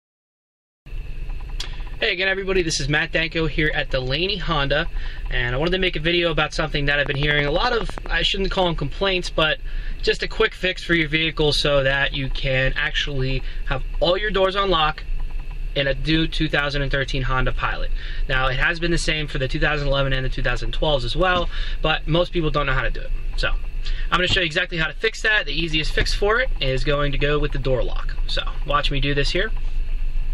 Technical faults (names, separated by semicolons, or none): train of clicks